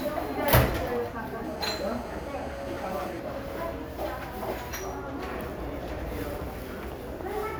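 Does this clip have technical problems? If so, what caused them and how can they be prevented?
Yes. From 1.45 to 3.20 s a hard, raspy buzz at about 217 Hz, rich in harmonics, sits steadily about 20 dB below the audio. This is GSM phone buzz: a nearby 2G phone on a call transmits in 217 Hz bursts, and the audio circuitry rectifies those radio pulses. Keeping phones away from recording gear, or switched off or in flight mode, prevents it.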